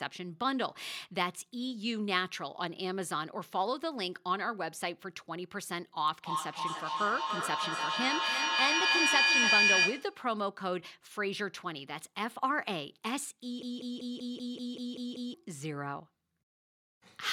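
From 6.18 to 10.27 s a feedback howl builds: a microphone and loudspeaker on the same call are feeding each other, so each trip around the loop comes back louder and narrower until only a tone near 3 kHz remains. It peaks about 7 dB above the speech, and the loop's round trip is roughly 0.3 s. Unlike an ordinary echo, the repeats grow rather than fade.

Between 13.63 and 15.34 s comes a broken-record loop, most likely a stall in the player, encoder or stream that kept resending the last fragment it held. A 192 ms slice of audio repeats nine times back to back, each copy identical and equally loud. That sameness, with no decay or pitch shift, sets it apart from echo or feedback, and the speech that belonged in those 1.7 s never arrives.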